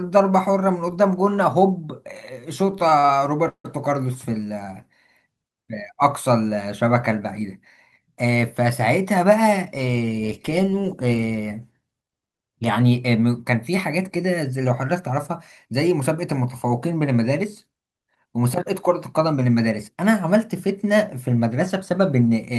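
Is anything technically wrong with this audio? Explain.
Yes. From 2.71 to 3.10 s the speech drags and stutters through five brief gaps, the longest 42 ms. These are repeated stalls (stutter): late packets kept emptying the jitter buffer, and about 109 ms was filled by continuing the last sound.

At 3.48 to 3.66 s the audio hangs for about 161 ms, fading to roughly 90 ms of silence before resuming. The likely cause is a call audio freeze, where held-up packets drained the jitter buffer.

At 9.16 to 10.03 s, 14.93 to 16.15 s and 21.74 to 22.51 s the speech sounds hurried but keeps its pitch, running at 108%, 105% and 107% speed. This is jitter buffer speed-up: an overfull buffer trimmed short pitch-period pieces, roughly 70, 70 and 50 ms in total.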